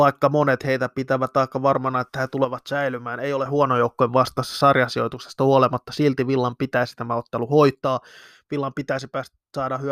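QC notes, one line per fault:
2.44–3.46 s, 5.14–5.20 s and 7.75 s to the end, one channel drops out: after "aika varmana että he", then briefly, then after "pitäisi tämä ottelu", the level falls abruptly by about 6 dB with tone unchanged. That fixed step, rather than a fade, points likely to a lost stereo channel halving the mono sum.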